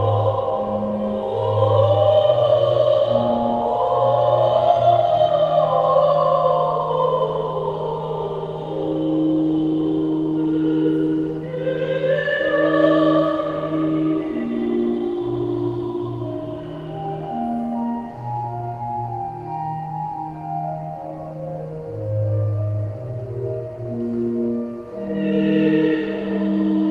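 No technical faults can be heard anywhere here.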